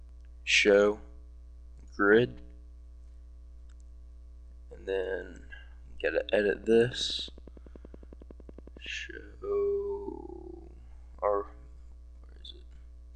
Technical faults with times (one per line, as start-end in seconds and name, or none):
6.45-8.87 train of clicks